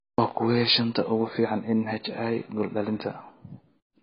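Speech, and it's AAC compression damage the whole way through, likely from a low-bitrate AAC-LC encode. Nothing survives above 5 kHz, so it sounds dull and muffled, and the sibilants and held vowels get that warbly, smeared fizz of heavy quantisation, which fits something around 16 kbps.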